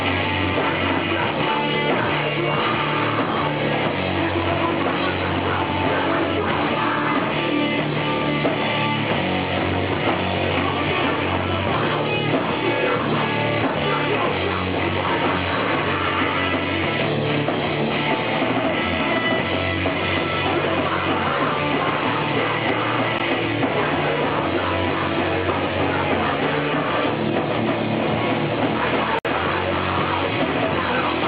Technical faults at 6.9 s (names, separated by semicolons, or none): none